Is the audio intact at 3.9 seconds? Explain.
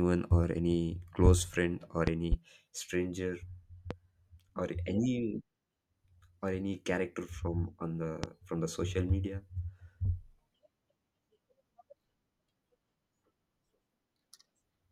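No, there's a loud pop from 3.91 to 3.94 s, likely a voltage spike from a plug or switch, hitting roughly 10 dB above the speech, which carries on underneath.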